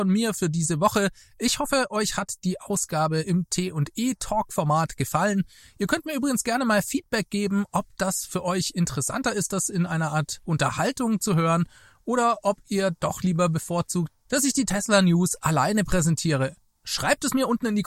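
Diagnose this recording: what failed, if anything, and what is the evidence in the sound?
Nothing in the signal chain failed: the speech signal holds steady and continuous throughout, with no stage of the recording or playback path leaving an audible mark on it.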